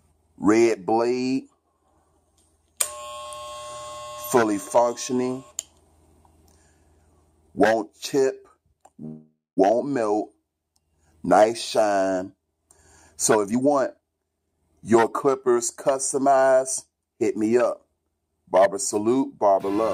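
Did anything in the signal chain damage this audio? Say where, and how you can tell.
Yes. At the network and jitter-buffer stage there is a call audio freeze from 9.05 to 9.59 s. The last sound is stretched into a fading fill for about half a second, ending in roughly 200 ms of silence, and the audio then picks up exactly where it stopped. That most likely means packets were held up and the buffer ran dry. Unlike packet-loss concealment, nothing is skipped. The stream is simply delayed by that half second.

The same buffer then works that delay off as a jitter buffer speed-up. From 13.34 to 14.54 s the audio runs at 130% speed, and from 14.94 to 17.04 s at a milder 107%. The first stretch trims around 0.4 s and the second a further 0.15 s or so, made up of many tiny pitch-period cuts. The pitch stays put, which separates this from a resampling or clock-rate error, where speed and pitch would rise together.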